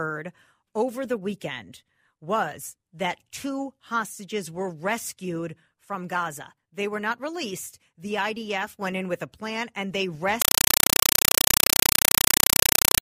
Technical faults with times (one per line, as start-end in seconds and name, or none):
10.42-13.01 compressed stream played as audio